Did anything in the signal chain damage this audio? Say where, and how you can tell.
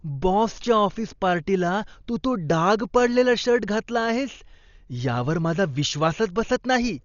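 Yes, at the codec stage: throughout the speech, nothing reaches above 7 kHz, and the dull band is filled with rough, fluttering noise around tones, which points to likely Dolby Digital compression starved of bits, fitting a rate near 40 kbps. A plain low-pass would leave the remaining band clean; here, bands with no mantissa bits are filled with noise.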